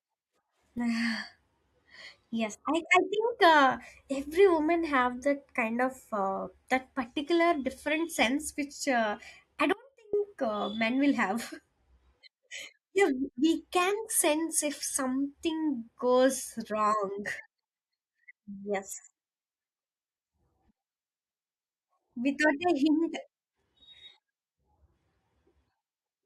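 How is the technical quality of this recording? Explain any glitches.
The recording has one glitch. An audio dropout to a faint residue runs from 9.73 to 10.13 s, between "sense which uh I" and "uh men will". The likely cause is a brief loss of the wanted signal while the path after the break stayed live. For about 0.41 s the speech cuts out abruptly rather than pausing or fading, leaving only faint sound roughly 25 dB below normal level.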